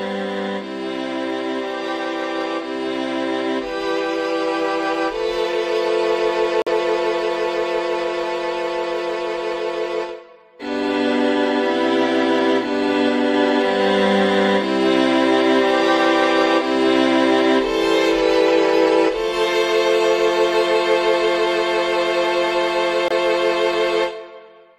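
Two short silent holes cut into the audio, at 6.62 s for 65 ms and at 23.08 s for 32 ms. This is corrupt frame muting: damaged compressed frames were rejected and replaced with silence, which fits two frames and one frame lost.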